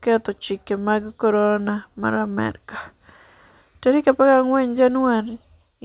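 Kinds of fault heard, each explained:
No faults are heard.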